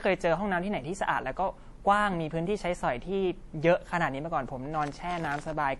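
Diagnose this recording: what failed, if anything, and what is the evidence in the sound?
The codec stage is at fault: the speech was likely passed through MP3 compression at a low bitrate, around 48 kbps. The encoder's bandwidth cut removes everything above 11.5 kHz, and the sparse, shifting spectral detail gives plainly audible watery, swirly damage throughout.

At the driver or buffer stage, buffer tearing occurs from 4.71 to 5.54 s. The writing and reading positions cross inside each period, splicing in a small slice of audio about 50 ms old. The hard joins produce a robotic 43.1 Hz buzz, which fits a 1024-sample buffer.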